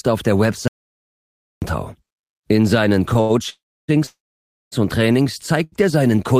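From 0.68 to 1.62 s the speech drops out to silence for about 0.94 s. The audio input was likely lost, through a disconnected device, a failed link or a mute, while recording continued to write silence. This audio dropout to silence is a dead gap with no room tone, and the speech resumes mid-flow rather than picking up where it stopped, so roughly a second of what was said is gone.

Next come two short stalls from a late packet, at 3.13 to 3.17 s and 3.21 to 3.31 s. In each, a packet arrived after it was due, the jitter buffer emptied, and the receiver held the last sound for about 17 ms and then 82 ms until the packet turned up. Nothing is lost. A sound is simply stretched, with a slight buzz or dip, and the speech carries on from the same point.

Two call audio freezes follow, from 3.49 to 3.90 s and from 4.06 to 4.74 s. Delayed packets likely starved the jitter buffer for longer. The receiver extended the last sound as a fading buzz or hiss that gives way to silence, for about 390 ms and 654 ms, with about 310 ms and 570 ms of silence in the two freezes. 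Unlike the dropout, the speech resumes exactly where it stopped, so a gap has been inserted rather than content removed. Unlike a short stall, the held sound decays into quiet.

A final short stall from a late packet, at 5.64 to 5.74 s, holds the sound for about 83 ms before continuing.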